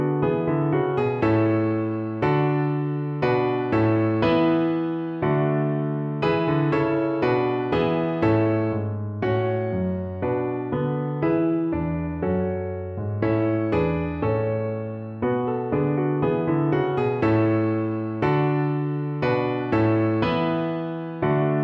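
No technical faults can be heard anywhere in the audio. There is no moment in the recording that needs a timestamp.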